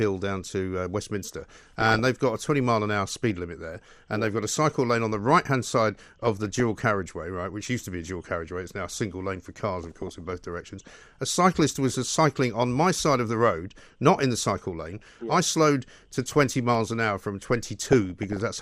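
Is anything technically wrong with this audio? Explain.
Yes. Throughout, the speech sounds dull and granular, with a gurgling edge and upper frequencies that flicker in and out. The likely cause is MP2 compression at a low rate, around 80 kbps, where upper sub-bands starve and switch off while the rest are coarsely quantised.

DAB burbling breaks into the speech at 1.39–1.99 s (after "down to uh", ending before "they've got a"), 3.08–3.31 s, 5.95–6.60 s, 9.84–10.31 s (after "single lane for cars"), 14.80–15.09 s and 17.80–18.41 s (after "miles an hour from"). Bit errors at a small fraction of a percent slip past error correction into the MP2 data. Corrupted samples put short blips of noise in single sub-bands, and corrupted scale factors make sub-bands jump in level for up to a frame, giving that burble.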